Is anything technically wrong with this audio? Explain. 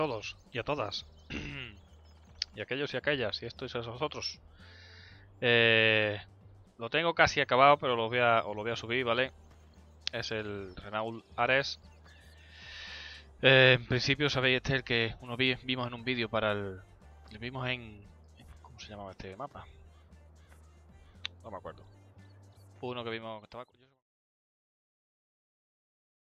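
No, nothing stood out on listening, and the gradual fade-out that begins around 22.5 s and ends at 24.08 s is an ordinary editor's fade.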